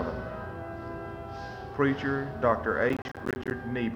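A short sound clip with a burst of processor overload crackle from 2.90 to 3.51 s. For about 0.6 s the audio tears into gritty crackle. The processor could not finish its small buffers in time. Around thirty deadlines were missed in that stretch. Each miss dropped a slice of around 10 ms to silence with hard edges. Those rapid gaps and clicks blur into the crackle.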